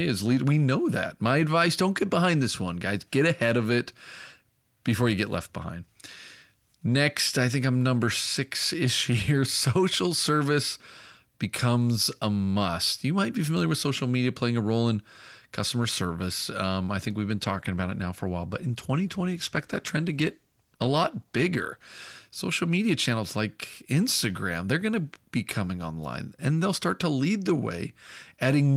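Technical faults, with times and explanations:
17.0–22.23 s: call bitrate drop. The encoder rate sounds like it falls from about 32 kbps to about 15 kbps, staying lowest for roughly 4.4 s. Coarser coding makes the speech rough and watery, and trimmed high frequencies leave it muffled until recovery.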